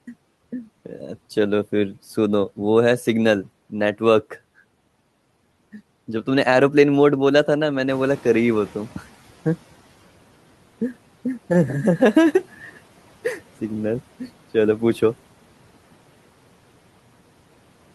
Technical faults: noise suppressor catching up

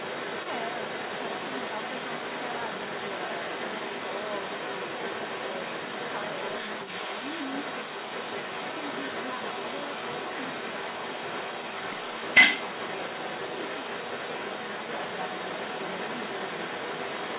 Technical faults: echo leak

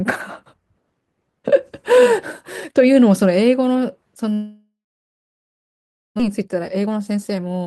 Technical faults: long network dropout; jitter buffer speed-up

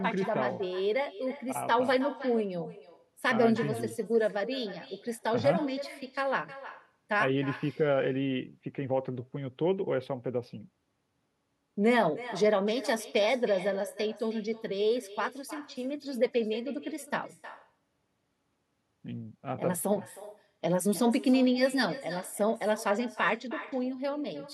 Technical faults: echo with no canceller

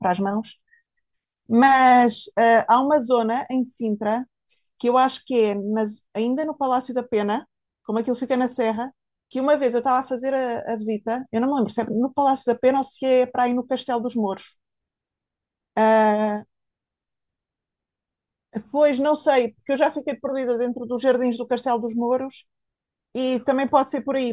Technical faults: none

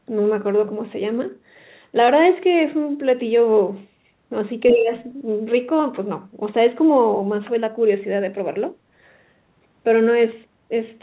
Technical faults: speech suppressed in double talk

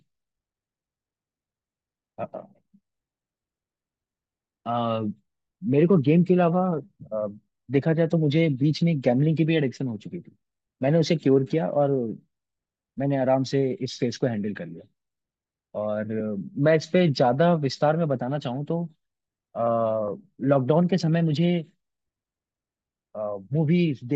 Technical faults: none

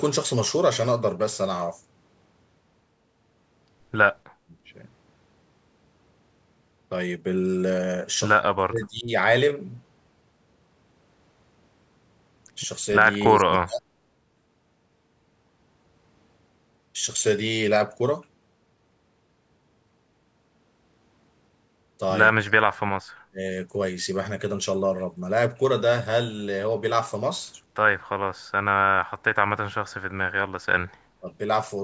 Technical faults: background gated by the echo canceller; speech suppressed in double talk

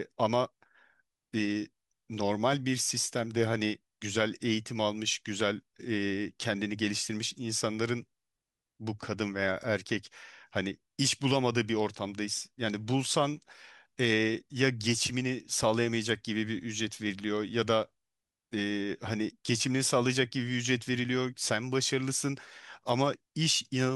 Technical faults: none

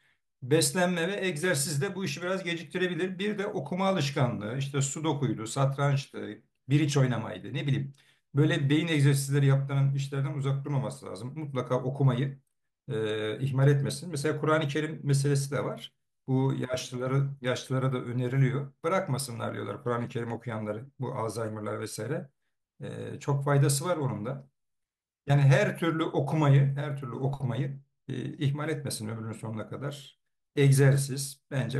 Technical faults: none

